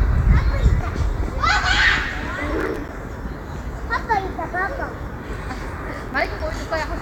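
From 2.60 to 2.89 s and again from 5.89 to 6.54 s, processor overload crackle tears through the sound. Missed deadlines, each around a 5 ms buffer, drop brief silent gaps with hard edges. The waveform shows notches cut to near silence, and the spectrogram shows thin vertical broadband streaks.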